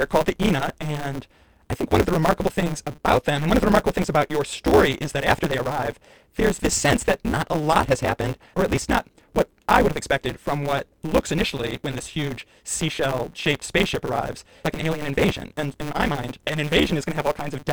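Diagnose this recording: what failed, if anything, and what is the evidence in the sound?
A block size mismatch (truncated) at the driver or buffer stage is present throughout this speech: a steady 150 Hz buzz, with the audio running 1.6 times fast at normal pitch. That fits 512-sample blocks with each tail discarded. A sample-rate error would raise pitch too.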